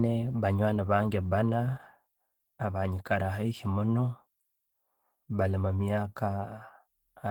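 The whole speech clip has passed through Opus voice compression at a rate low enough to be plainly audible, which fits about 16 kbps in hybrid mode. The SILK linear-prediction layer carries the lower band and a thin CELT layer covers the top, so the band reaches fullband but the excitation is coded coarsely, probably in 20 ms frames. The voice sounds hoarse and slightly robotic from start to finish.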